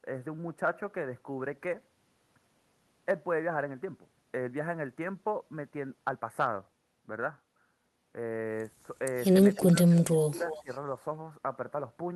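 Faint scraps of a delayed repeat of the speech surface at 9.54–9.62 s and 10.12–10.17 s, then a much stronger one at 10.49–10.78 s, each trailing the original by about 320 ms. This echo leak is likely a far-end loudspeaker whose echo canceller let part of the returned speech through. Across 9.55–10.7 s the talker's speech also dips by up to roughly 20 dB, in patches totalling around 0.7 s. That is speech suppressed in double talk, likely the canceller turning both signals down while two sides overlapped.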